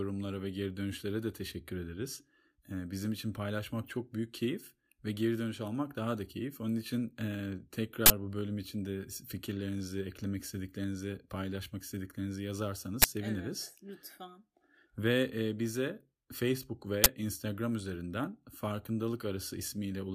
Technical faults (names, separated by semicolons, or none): uninitialised buffer